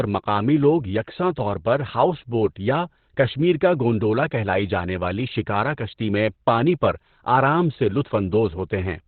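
Throughout the clip the speech is muffled and hoarse, confined to a narrow telephone-like band with the upper frequencies missing. This heavy damage points to Opus compression at a very low bitrate, around 12 kbps, likely with the encoder in its narrowband SILK speech mode.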